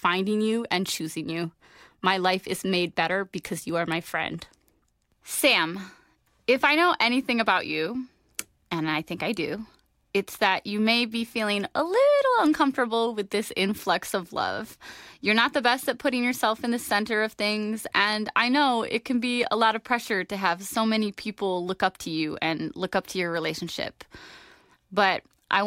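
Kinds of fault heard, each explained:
Nothing stood out on listening to this speech recording.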